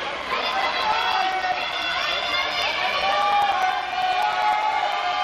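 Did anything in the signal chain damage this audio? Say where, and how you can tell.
Yes, at the driver or buffer stage: periodic USB or driver dropouts. From 0.12 s to 5.13 s there's a tick every 0.1 s, each a short gap of roughly 4 ms filled with silence. That steady ten-per-second spacing points to something stalling the USB bus or audio driver on a timer.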